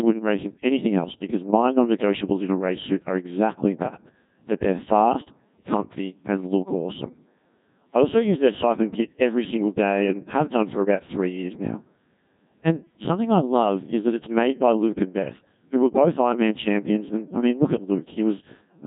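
Throughout, the speech runs through the Codec 2 vocoder, heavily damaged, at a rate fitting about 1.6 kbit/s. Rebuilt from sine waves following pitch and envelope, it sounds robotic and buzzy, nothing above 3.7 kHz. Unlike a smearing low-bitrate codec, it resynthesises the voice itself.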